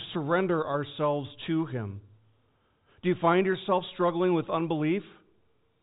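Speech over a telephone-band channel with nothing above about 3.8 kHz, consistent with G.711 A-law at 64 kbps, and no faults to report.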